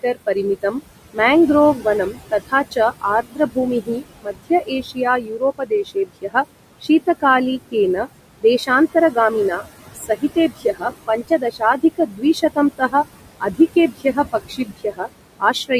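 Noise suppressor artifacts run throughout. The suppressor pulls steady background down by about 20 dB each frame, so the room noise, about 12 dB below the speech, sinks in gaps and swells under speech. On a spectrogram the residue shows as flickering, patchy specks between phrases.

Speech cut by the noise suppressor affects 0.03 to 1.19 s, where moments totalling about 0.15 s drop by up to about 19 dB. It recurs from 1.76 to 15.71 s, with around four seconds in total losing up to about 21 dB. Faint consonants and trailing syllables are mistaken for noise and sound swallowed. The waveform shows abruptly shrunken word edges, and the spectrogram shows missing high-frequency consonant energy.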